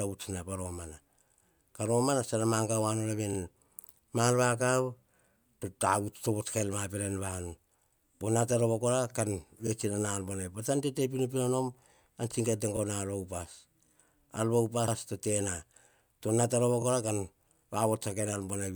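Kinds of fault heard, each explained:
Repeated frames: short runs of compressed data play twice, so the same slice of speech is heard again as a brief stutter. Five occur, repeating blocks of 48, 24, 24, 72 and 24 ms, consistent with 24 ms frames, each lengthening the audio accordingly.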